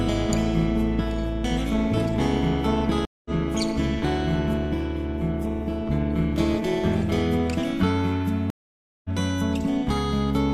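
Overlap-add ripple runs from 0.0 to 7.22 s. The sound was split into windowed frames and rejoined with overlaps that don't sum to a constant gain, so the level swings by about 6 dB at around 200 Hz. It is heard as a metallic buzz with extra tones around each note.

Stream reconnects occur at 3.05 to 3.31 s and 8.50 to 9.09 s. Each time the connection dropped, a fresh decoder started mid-stream, and the audio went silent for 202 ms and then 544 ms. It resumes roughly a third of a second further on, so a little of the sound is skipped.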